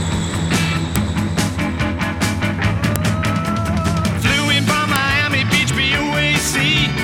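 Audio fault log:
0.96, 2.96 and 4.96 s: file header played as audio. A sharp, loud click every 2.0 s marks each joined piece, its header bytes decoded as samples. On the waveform it is a brief tall spike; on a spectrogram, a thin vertical broadband line.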